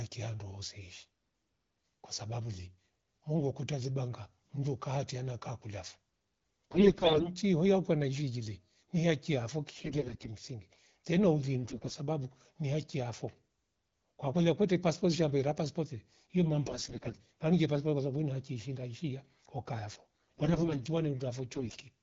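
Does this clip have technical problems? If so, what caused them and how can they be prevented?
Yes. The speech carries AMR bit errors in six bursts: 6.74–7.30 s, 9.73–10.27 s, 11.64–11.98 s, 16.66–17.21 s, 19.91–20.78 s and 21.53–21.82 s. Bits arrived flipped in frames whose core checksum still passed, so the decoder played them, with excitation pulses misplaced and pitch, gain and spectral detail wrong. The voice turns hoarse and gargly but keeps its rough pitch and level, unlike packet loss, which leaves gaps or smeared, faded repeats. The first burst, around 6.7 s, has the highest bit error rate, about 20%. Between bursts the wideband codec sounds clean, consistent with a rate near 12.65 kbit/s. To prevent it, improve the radio link or use stronger channel coding and a lower-rate mode on weak connections.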